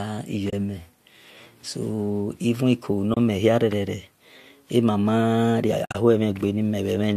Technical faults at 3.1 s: AAC frame loss with muting

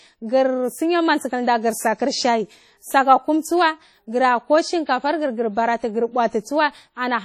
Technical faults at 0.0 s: WMA compression

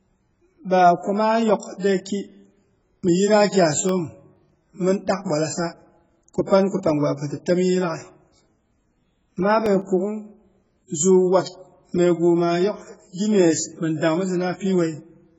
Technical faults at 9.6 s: AAC compression; CD scratch ticks

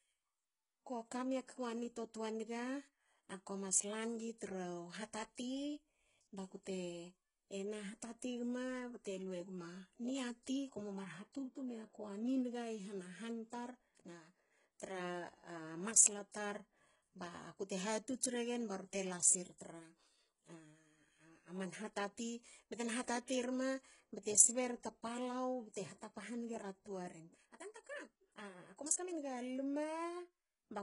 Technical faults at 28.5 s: HE-AAC compression; time-stretched section

